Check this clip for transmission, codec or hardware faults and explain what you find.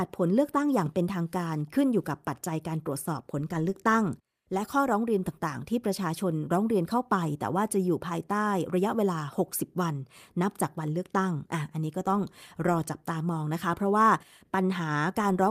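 No transmission, codec or hardware fault can be heard anywhere in this speech recording.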